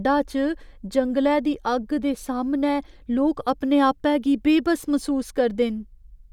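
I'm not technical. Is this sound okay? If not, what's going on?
Yes, nothing stood out as wrong when listening to this speech recording.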